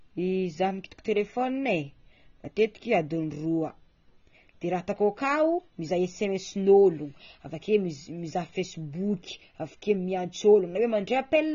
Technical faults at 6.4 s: AAC compression

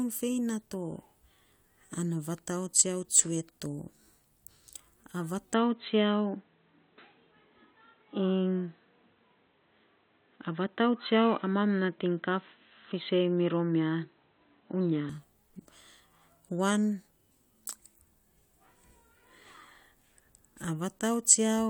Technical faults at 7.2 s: input switched to a poorer device

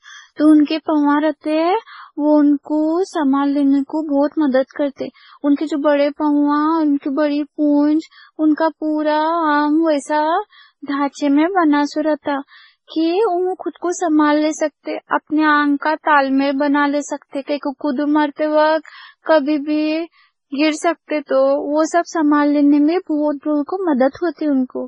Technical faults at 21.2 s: transcoding between lossy codecs

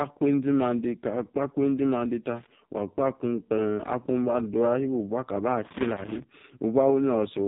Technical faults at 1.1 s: AMR narrowband mobile codec

